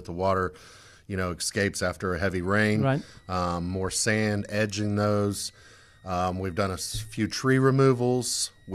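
Right after "escapes after a heavy", at 2.40 s, a switching supply whistle comes in and stays until the end at 8.74 s. It's a thin high tone around 2 kHz, wandering between roughly 1.86 and 2.06 kHz, sitting somewhere near 40 dB under the speech. That's a switching power supply whose switching has dropped into the audible range and leaked into the audio path, so the faint whine hangs behind the speech from then on.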